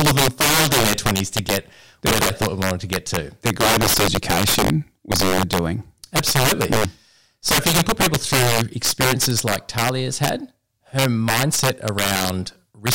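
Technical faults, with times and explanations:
Throughout, integer overflow: the gain stage drives the speech about 9 dB past full scale with no limiting, so the samples over the top, a few percent of them, wrap around to the opposite extreme, giving violent cracks on loud syllables, far harsher than clipping.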